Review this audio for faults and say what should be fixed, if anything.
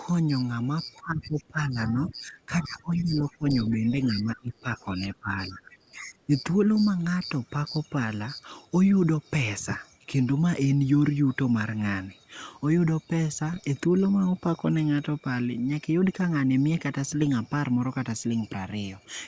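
A faint second voice leaks through, likely other side's voice leaking through from a loudspeaker echo the canceller missed. It sits roughly 25 to 30 dB under the talker. It appears at 0.94–1.43, 1.87–2.15, 2.96–3.34, 3.87–4.05 and 5.51–5.74 s. Better echo cancellation or a headset would prevent it.

The talker's level sags by up to about 20 dB in pieces. This happens from 0.96 to 3.53 s and from 3.84 to 6.31 s, about 1.5 s in each span. The canceller likely turned both sides down during double talk, which is speech suppressed in double talk. Tuning double-talk detection would prevent it.

Pops and short rough bursts with brief level jumps occur at 2.74–2.82, 13.52–13.67 and 17.21–17.32 s. These are bit errors on an ADPCM link, here the 64 kbit/s G.722 path. Each flipped bit throws off the decoder's step size and predictor, so the damage rings on briefly. Error protection or a cleaner link would prevent them.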